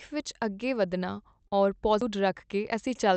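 At 1.47 to 1.53 s there is a short concealed packet loss: about 40 ms of the call arrived too late for the decoder, and 35 ms of stand-in audio extrapolated from the preceding speech fills the gap before blending back, heard as a brief smear or wobble.

At 2.01 s a CD skip occurs. The disc player's laser lost its track position, muted for a few milliseconds, and resumed from a different point on the spiral, producing a small tick followed by an abrupt discontinuity in the speech.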